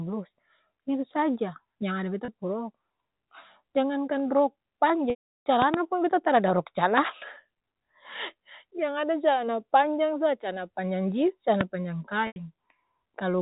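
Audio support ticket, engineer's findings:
Packet loss with pitch repetition. 2.25 s: brief held, buzzy note, about 30 ms, which fits 30 ms packets. 5.10–5.46 s, after "jangankan rok": 360 ms gap. Last pitch period repeated, fades over about 50 ms to silence, then cross-fades back. 12.27–12.36 s, after "panjang jins calana panjang": 90 ms gap, same repeat-and-fade.

Loud pop. 5.62–5.76 s: two sharp pops in quick succession, peaks roughly 20 dB above the speech. Speech continues underneath. 11.61 s, after "calana panjang jins calana": single pop, similar level. Cause likely a voltage step from a plug, switch or static discharge, shaped by downstream circuits. Path is G.711 telephone coding, band-limited at 4 kHz.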